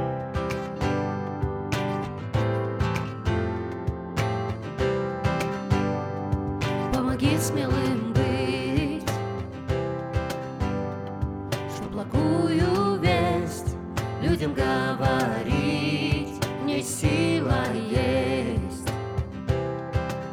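No technical faults can be heard anywhere in this clip. Nothing in the audio points to a problem in how it was captured, carried or played back.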